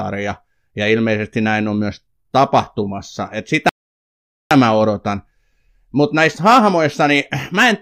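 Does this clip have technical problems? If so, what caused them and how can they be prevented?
Yes. At 3.69 s the speech cuts abruptly to silence, holds for about 0.82 s, and then picks up at 4.51 s with "mä odotan", continuing exactly where it broke off with nothing skipped. This is a rebuffering stall: playback drained its store of downloaded audio and paused until more data arrived, so the gap adds time rather than losing any. A larger playback buffer, or a lower bitrate when the connection slows, would prevent it.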